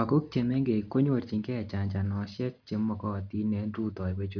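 No technical faults are audible.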